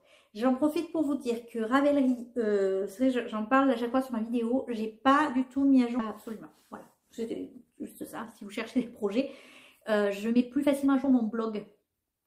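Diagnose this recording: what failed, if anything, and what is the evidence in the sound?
Skip ahead at 5.99 s, in the network jitter buffer: about a second and a half of audio was discarded, and playback jumps straight forward with no gap filled.

Jitter buffer speed-up from 6.94 to 8.02 s (105%), 8.44 to 9.22 s (107%) and 9.80 s to the end (122%): the receiver repeatedly cut short pitch-period pieces to drain excess buffered delay, so the sound runs faster at unchanged pitch.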